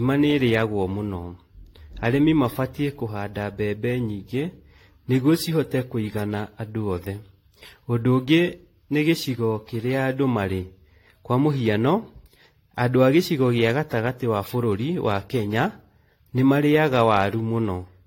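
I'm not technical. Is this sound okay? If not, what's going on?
No. From start to finish the speech has a swirly, watery, hollow quality, and the start of each sound is blurred rather than crisp. This is generation loss: the recording was most likely squeezed and unpacked with a lossy format several times over, perhaps five or so, and each round added its own damage. A single rough compression sounds dull or fizzy, but repeated rounds pile up into this smeared, churning texture.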